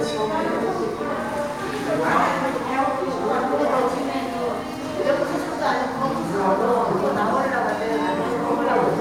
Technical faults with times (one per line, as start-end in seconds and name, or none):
none